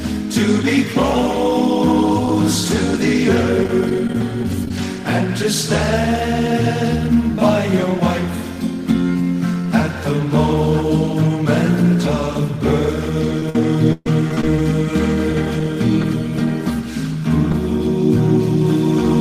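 Scattered short gaps run from 3.36 to 4.98 s. About ten brief packet losses, the longest around 15 ms, were each patched by extending the preceding sound, roughly 100 ms in all. The audio stays clear but carries small ticks and hiccups.

Repeated packet loss, heard as robotic sound, follows from 13.22 to 14.58 s. Seven gaps, the longest 130 ms, arrive close together. Concealment stretches the previous sound over 257 ms, about 19% of the stretch, leaving it choppy with pieces missing.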